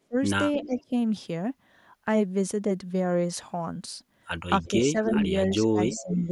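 The opening, 0.02 to 0.16 s, dips by about 30 dB. This is likely speech suppressed in double talk: the echo canceller turned the talker down while the far side spoke. Echo leak follows at 0.58 to 0.83 s. A faint copy of the voice returns 320 ms late, about 15 dB down. It is likely loudspeaker pickup the canceller missed. Milder suppression recurs at 0.61 to 0.92 s and 4.61 to 5.13 s. Echo leaks again at 5.05 to 5.24 s and 5.52 to 5.56 s. A final suppression runs from 5.61 s to the end. Within it, more echo sounds at 5.9 to 6.15 s.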